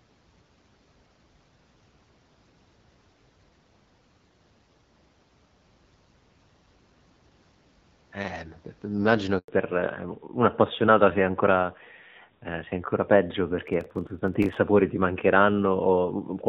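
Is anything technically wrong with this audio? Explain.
Yes, three things go wrong, all in the second half of this speech clip. Up to about 9.4 s it sounds like a clean HD Voice call, with only light AMR wideband codec coloring.

Handover gap, 9.38 to 9.48 s: the call is being passed from one network to another, and for about 100 ms no speech frames get through. The voice cuts out quickly, there's a short dead silence, and whatever was said in that window is lost.

Fallback to narrowband, from 9.48 s to the end: once the new link comes up, the call drops out of HD Voice into an older narrowband codec, likely a lower-rate narrowband AMR mode. Nothing above 4 kHz survives, so from here on the voice sounds duller and rougher.

Processor overload crackle, 13.68 to 14.57 s: the device can't finish its very small audio buffers in time, each well under a millisecond, and it misses a few dozen of them over that short stretch. 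Each missed buffer is simply skipped, leaving a tiny hard-edged gap. Together the gaps come through as a gritty, crackly tearing over the voice that stops once the load eases.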